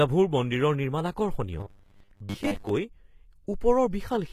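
HE-AAC compression, likely, runs through the whole clip: the speech's upper band is rebuilt by copying lower frequencies upward rather than coded directly, so s sounds come out gritty and metallic, with nothing above 14.9 kHz. The plainly audible damage points to a low bitrate near 20 kbps.

Robotic sound from repeated short buffers appears from 1.60 to 2.74 s, right after "মন্দিৰৰ নিৰ্মাণ". Fresh audio likely arrived too slowly, so a 10 ms slice was looped in its place for roughly half that stretch, imposing a rigid 100 Hz metallic buzz on the speech.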